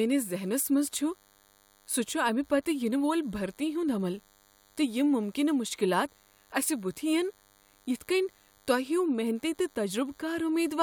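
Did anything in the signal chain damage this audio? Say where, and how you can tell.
Yes. A thin, steady buzz with many harmonics runs under the speech for the whole clip, sitting well below the talker. That is DECT cordless phone buzz: the analogue wiring or input stage rectified radio bursts arriving every 10 ms, producing a 100 Hz tone.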